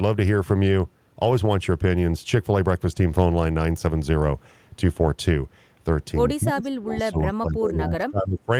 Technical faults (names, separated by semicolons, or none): speech suppressed in double talk; echo leak